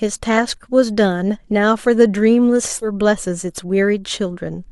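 At about 2.81 to 2.87 s the speech suddenly jumps forward with a short blip, as if a chunk of the talk just vanished. That's a stream segment skipped: one piece of the stream likely failed to load, and the player carried on with the next one.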